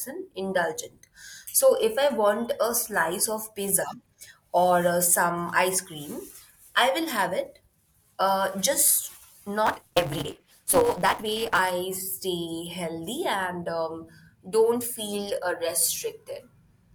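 From 9.65 to 11.59 s the speech turns hurried and gains a steady buzz near 188 Hz, running about 1.88 times too fast with its timbre kept. This is a block size mismatch (truncated): each written block is longer than the next stage's read, which fits a 256-sample read, so every block's tail is discarded.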